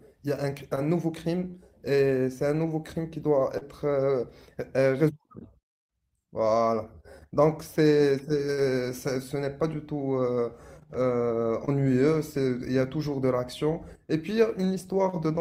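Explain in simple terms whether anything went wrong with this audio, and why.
Short concealed packet loss at 0.75, 1.51, 3.58 and 11.65 seconds: brief stretches of speech arrived too late, so the receiver patched each gap, leaving a quick smear or wobble.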